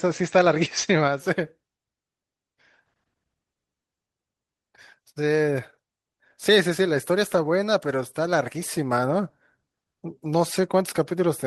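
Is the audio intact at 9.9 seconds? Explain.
Yes, at 9.9 seconds the speech carries on without any audible dropout, click, distortion or other fault.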